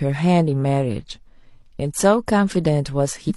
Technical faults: damaged data in a compressed stream

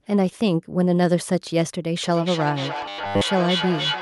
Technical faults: feedback echo between two devices; robotic sound from repeated short buffers

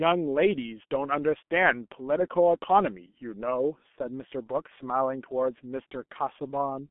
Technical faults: G.723.1 codec

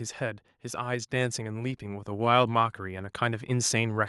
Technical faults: automatic gain rising

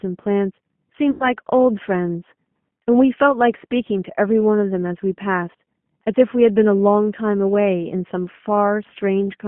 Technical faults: G.729 codec; VoIP packet loss concealed by the speech codec

